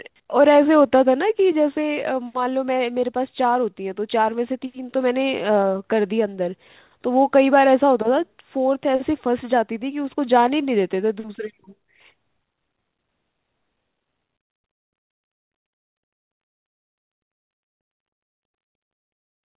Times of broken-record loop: none

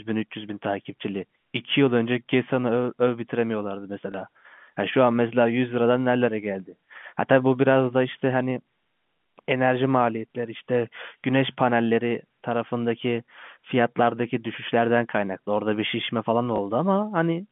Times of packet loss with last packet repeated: 4.12, 16.56

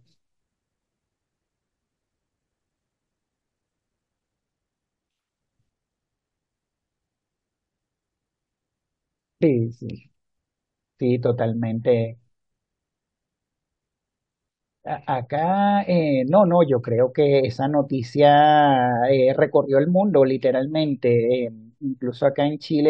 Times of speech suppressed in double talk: none

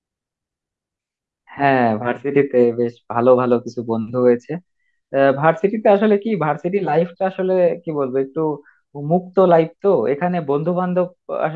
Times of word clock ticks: none

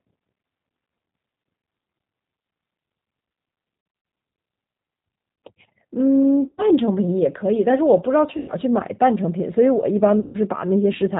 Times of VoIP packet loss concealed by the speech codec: 3.81-4.05, 6.48-6.63, 8.37-8.52, 10.20-10.38

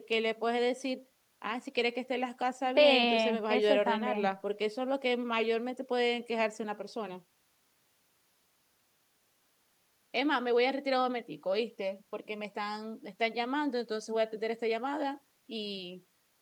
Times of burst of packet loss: none

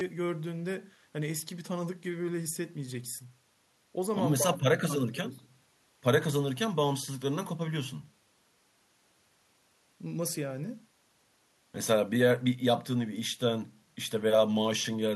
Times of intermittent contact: none

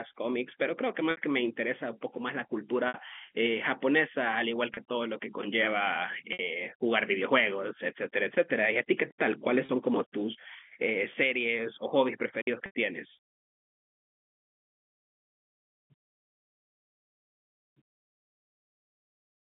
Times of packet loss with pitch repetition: 1.11-1.17, 2.88-2.94, 4.74-4.77, 6.33-6.39, 9.66-9.69, 12.66-12.75

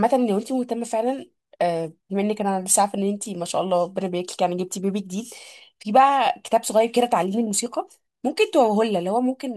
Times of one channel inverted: none

